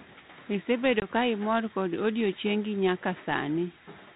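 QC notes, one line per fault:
1.00–1.06 s, packet loss on an ADPCM call: about one packet (20 ms) drops to a hard-edged silence, and speech resumes into "ka imor kod odiechiengi" slightly distorted while the 32 kbit/s G.726 decoder's predictor and step size resynchronise with the sender's.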